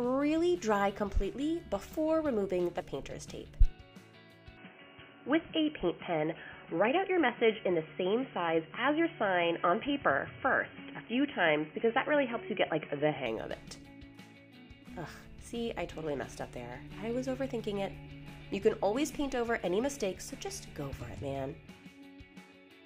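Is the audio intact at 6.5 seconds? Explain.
No. From 4.57 s to 13.26 s the sound loses everything above 3.2 kHz and turns dull and boxy, with a new, faint background noise well below the signal. There's no gap at either edge and the level stays about the same. The likely cause is an input switched to a poorer device, a narrower-band microphone or headset call profile. What separates this from a plain low-pass filter is the change in noise floor and tone, which a filter alone wouldn't bring.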